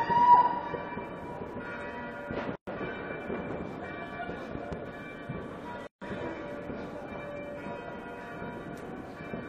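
A recording of everyday sound, it twice drops into brief silence, from 2.56 to 2.67 s (about 117 ms) and from 5.87 to 6.02 s (about 146 ms), then resumes exactly where it left off. These are gaps at a join of encoded pieces. Each section was encoded on its own and butted together untrimmed, so the encoder's start-up delay and end-of-stream padding remain as dead air, softened at the edges by the codec. Between 4.55 and 4.75 s, two sharp pops jump out roughly 10 dB above the surrounding sound, which continues beneath them without interruption. This is a loud pop, likely caused by a voltage step or spike from a connector, switch, static discharge or driver glitch entering the signal path, where the following circuitry shaped it into the audible double click.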